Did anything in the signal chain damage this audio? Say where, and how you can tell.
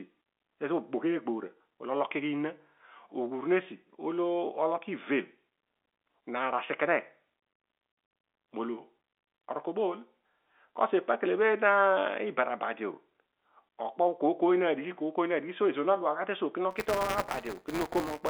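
Yes, buffer tearing at the driver or buffer stage. From 16.70 s, just after "duaghu suo", a 188 Hz rattle runs to the end, which fits a 256-sample buffer. Each period splices in a small slice of audio about 10 ms old.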